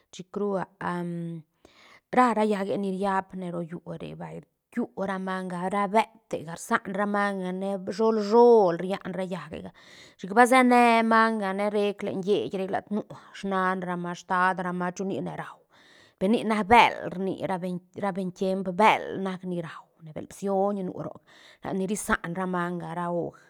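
No technical faults can be heard in this recording.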